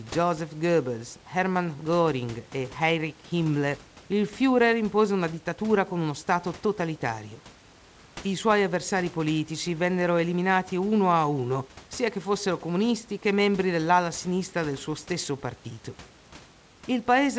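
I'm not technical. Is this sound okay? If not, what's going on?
Yes, there are no faults.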